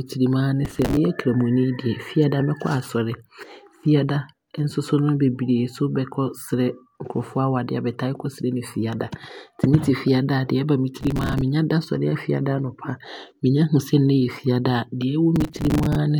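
A speech recording broken by three bursts of gritty, tearing processor overload crackle, from 0.65 to 0.97 s just after "tirim aa ne", 11.01 to 11.41 s just before "menya da sɔre", and 15.36 to 15.95 s. In each, some 20 to 30 very short buffers, around 5 ms long, miss their deadlines in a row, and stale audio is replayed with hard edges.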